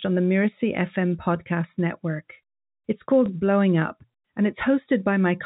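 Packet loss with the last packet repeated at 3.26 s: a brief gap in the speech was filled by replaying the preceding audio, a span that fits a single 20 ms packet. The repeat sounds like a small blip over the band-limited telephone sound.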